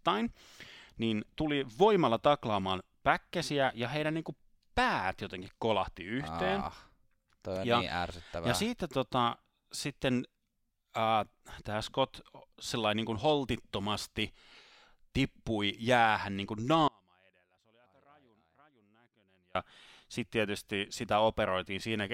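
The speech signal was likely lost while the path stayed live, an audio dropout to a faint residue from 16.88 to 19.55 s: after "tippui jäähän niin kuin", only faint sound roughly 35 dB down remains until "sitten tietysti".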